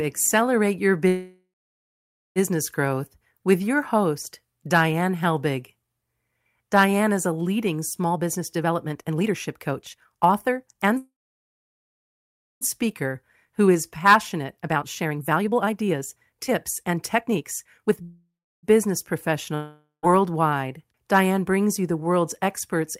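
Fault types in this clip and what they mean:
Call audio freeze: At 1.07, 10.98 and 18.03 s the speech halts. The last sound trails into a fading buzz, then silence, for 0.6 to 1.6 s, likely from delayed packets. It resumes exactly where it stopped, so unlike a dropout nothing is skipped.
Jitter buffer speed-up: From 8.10 to 10.97 s and 12.85 to 18.01 s the speech runs 24 to 33 percent fast, shedding roughly a second each time. A milder 8 percent stretch comes near 21.2 s. Pitch stays unchanged, unlike a faster playback rate.
Long network dropout: At 19.55 s the speech fades through a brief buzz into silence, likely from lost packets. When it returns about 0.48 s later, that much speech is gone. Unlike a freeze, it jumps ahead rather than continuing from where it stopped.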